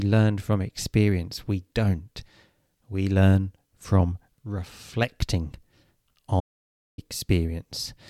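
An audio dropout to silence runs from 6.40 s to 6.98 s, a gap of about 0.58 s. The speech stops abruptly mid-flow and then resumes just as suddenly, and the interval between is silent, with no room tone or background hiss carried through. The likely cause is a brief loss of the input signal, such as a dropped connection or momentary mute, while recording continued writing silence, so whatever was spoken there is lost.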